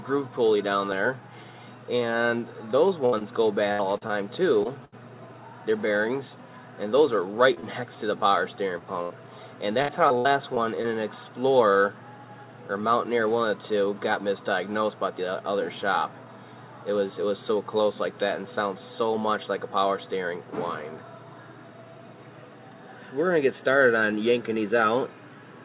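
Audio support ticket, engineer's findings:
Repeated packet loss (robotic sound), 3.06 to 4.94 s: choppy, metallic stretch with pieces dropping out. Seven concealment gaps, about 0.29 s patched in total, longest 71 ms, roughly 15% of the span. Jitter buffer repeatedly late or empty. Decoder extends last sound each time, and holes recur before audio settles. Same symptom at 9.82 to 10.86 s: five gaps, about 0.18 s patched, longest 66 ms, roughly 17% of span.

Short concealed packet loss, 7.54 to 7.58 s, 7.60 to 7.65 s and 8.79 to 8.82 s: brief smears or wobbles. Onsets may blur or drop. About 20 ms lost at each point, filled by continuing the preceding pitch or shaped noise, then crossfaded back into real audio. Isolated late or lost packets on the receive side.

Burst of packet loss, 9.02 to 9.12 s: held buzz or fading hiss, then audio resumes further on with a chunk missing. About 80 ms lost in one run. 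The concealer stretched the last sound and attenuated it as the gap lengthened. Probable network burst just ahead of the second choppy stretch. The G.711 mu-law call path at 64 kbps carries nothing above 4 kHz.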